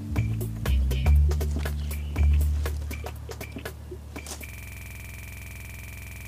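At 4.49 s the audio locks into a system hang loop that continues to the end of the clip: a single 46.44 ms fragment repeats exactly, 39 times, at 21.5 Hz. The computer or driver stopped supplying new audio while the sound hardware kept replaying its ring buffer, and that period fits a 2048-sample buffer. Because every repeat is identical and evenly spaced, with no gaps, fades or recovery, it is distinct from dropouts or concealment glitches.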